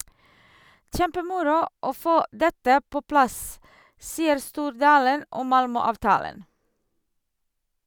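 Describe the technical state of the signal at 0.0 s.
At 0.0 s the signal is intact, with no audible technical fault at that moment.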